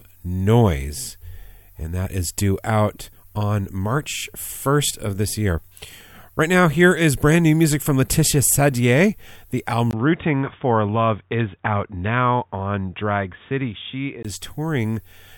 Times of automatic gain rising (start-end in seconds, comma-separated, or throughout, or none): none